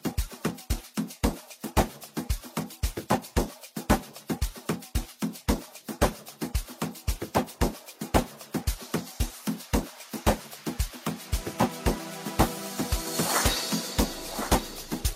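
No technical faults can be heard anywhere in the clip. The sound carries on without any break, jump or disturbance in its playback.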